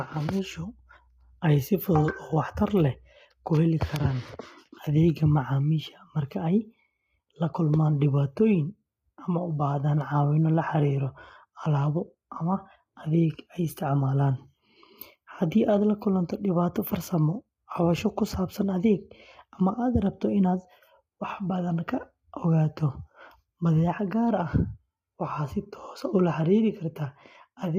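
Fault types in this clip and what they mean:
Low-delay AAC compression: The speech sounds rough and grainy from start to finish. Noise fills the gaps between the pitch harmonics. Nothing is heard above 15.5 kHz. The likely cause is AAC-ELD, the low-delay AAC of video calls. It codes sound in short frames of about 10 ms. Frames that short cannot separate the voice harmonics cleanly, and they need more bits. The heavy damage fits a bitrate around 24 kbps.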